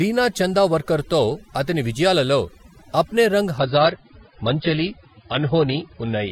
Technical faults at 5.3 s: overdone noise removal; adaptive stream at a lower bitrate

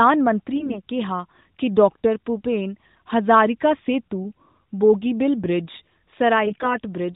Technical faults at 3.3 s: none

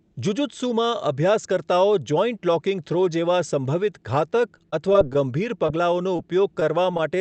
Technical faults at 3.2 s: none

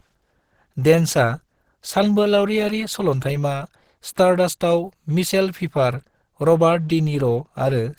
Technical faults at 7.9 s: Opus compression

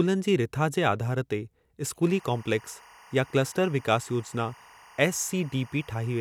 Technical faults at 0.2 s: none

